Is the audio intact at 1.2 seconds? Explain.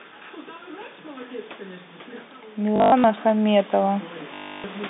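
Yes, the speech at 1.2 seconds comes through intact, with no fault at that moment.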